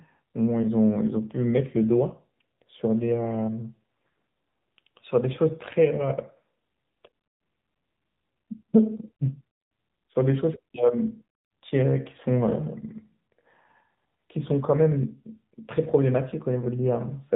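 From start to finish, the speech has passed through the AMR narrowband mobile codec at a low bitrate that fits about 7.4 kbps. The 8 kHz sampling removes everything above 4 kHz, and sparse excitation pulses leave a plainly audible buzzy, synthetic edge.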